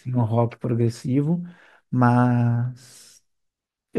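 A speech recording with nothing technically wrong with it.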